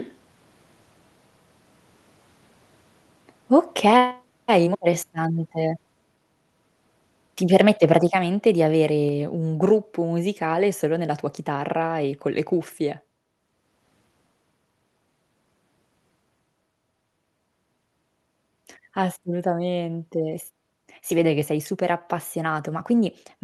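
Microphone volume stepped down at 4.11 s and 8.07 s: speech and background drop abruptly, by about 5 dB, then about 4 dB. The likely cause is the call software judging the microphone too loud and cutting its input volume in one step.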